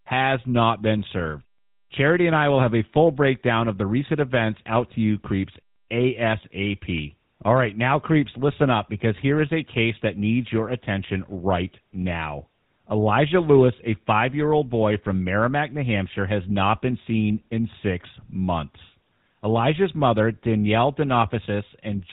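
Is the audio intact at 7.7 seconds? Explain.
No. GSM full-rate codec damage is present at 7.7 seconds, as throughout the clip, at a rate that fits 13 kbps. The speech is rebuilt from a vocal-tract model fed by sparse, regular pulses, with nothing above 4 kHz, so it sounds plainly buzzy and gravelly.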